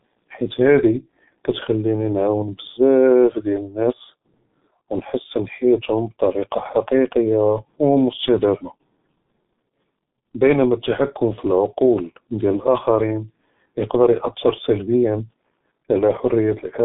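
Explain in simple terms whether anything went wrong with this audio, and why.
Something did go wrong, and it lasts the whole clip. The speech has passed through the G.723.1 codec, an old internet-phone format that squeezes audio very hard. It throws away everything above about 3.8 kHz, so the speech sounds muffled, like a cheap phone line. It also updates its picture of the voice slowly, in chunks. That makes the speech sound hoarse and rough, and consonants like s and t come out blurred.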